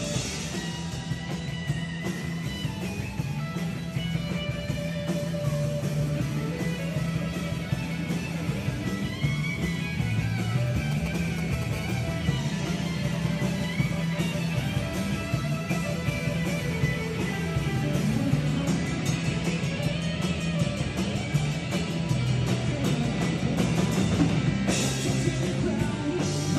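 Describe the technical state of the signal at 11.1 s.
At 11.1 s the signal carries GSM signalling bursts, running from 10.92 s to 11.64 s. A nearby 2G phone exchanging control traffic emits short groups of radio pulses that the audio circuitry rectifies into a galloping pattern of short 216.7 Hz buzzes, sitting roughly 10 dB under the sound. Unlike mains hum, it is pulsed rather than continuous, and it sits at 217 Hz rather than 50 or 60 Hz.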